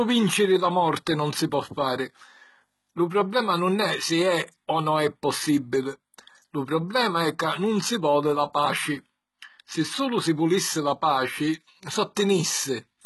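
From start to finish the speech carries heavy HE-AAC compression damage, likely from encoding at a very low bitrate, one that fits roughly 16 kbps. The treble is not the original but a rebuilt copy of lower bands, so sibilants come out gritty and lispy with a metallic sheen. On a spectrogram, everything stops at a hard ceiling of 11.8 kHz, and the upper band shows smeared, blocky texture whose harmonics fail to line up with those below.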